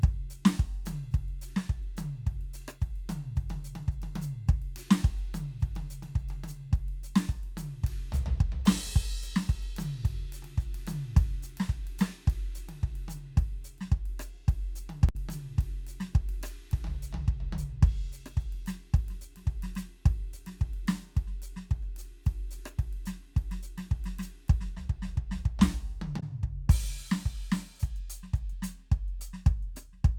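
At 15.09–15.15 s and 26.19–26.23 s, damaged data in a compressed stream makes the decoder lose frame sync. Each causes a brief glitch in the music.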